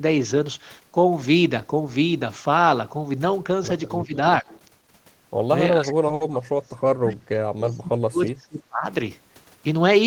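At 4.06 to 4.14 s and again at 4.42 to 4.46 s, the speech dips briefly, by about 15 dB and then about 10 dB. This is likely speech suppressed in double talk. The echo canceller turned the talker down while the far side was also speaking.

From 4.52 to 4.61 s, a faint delayed copy of the voice is heard, about 25 dB below the speech and trailing it by 366 ms. This is likely echo leak. Loudspeaker sound reached the far microphone and was not fully cancelled.

From 5.73 to 8.86 s, a longer stretch of suppression follows. For about three seconds, the voice sinks by as much as about 35 dB. This is again likely double-talk suppression.

Inside that stretch, from 6.14 to 6.22 s, one sound is held too long. This is a short stall from a late packet. The receiver stretched the audio for 60 ms while it waited. Nothing is missing, but the playout delay grows by 60 ms.

At 7.67 to 7.77 s, the echo leak returns, likely from the same uncancelled loudspeaker path. 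It is again 366 ms late and sits about 30 dB below the speech.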